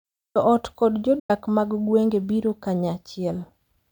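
At 1.19 s, just after "ot kod", the sound fades within 8 ms to silence until 1.30 s, at "mag gwenge biro". This is a digital broadcast dropout: the receiver muted about 96 ms of failed frames, which fits three lost frames.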